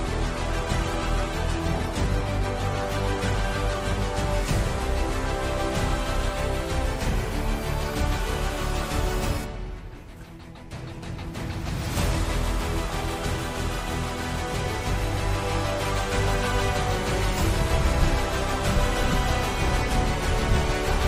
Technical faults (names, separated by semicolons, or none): adaptive stream starting at a low bitrate